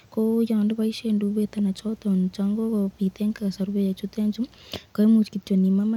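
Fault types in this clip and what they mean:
Video or display buzz: a screen or video cable sat close enough to the audio path to couple its interference into it, so the picture's 60 Hz field rate became part of the recording. In this speech clip it shows as a low, steady buzz at 60 Hz with a gritty hash riding above it, faint and well below the voice, present from about 1.26 s to 4.58 s.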